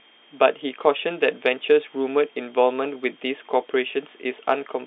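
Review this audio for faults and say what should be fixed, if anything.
Nothing in this audio needs to be fixed, as no faults turn up in it.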